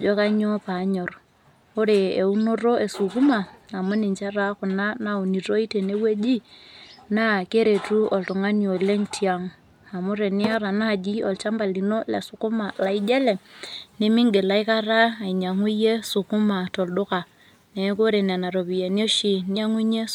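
At 12.97 s the speech turns thin and bright, and it stays that way to the end. This is pre-emphasis left on. The treble was lifted before storage, and the matching cut was never applied on playback. The shape fits the CD 50/15 µs curve. Around 10 kHz the boost is about 8 dB above the level at 1 kHz. Sibilants hiss and sharpen. The lower body of the voice sounds weak by comparison.

At 19.56 s the audio jumps forward. These are compressed frames skipped. Whole blocks of coded audio never reached the output, because they were either missing or rejected as damaged. The jump is roughly 150 ms. With a 26.1 ms frame, that points to about five lost frames.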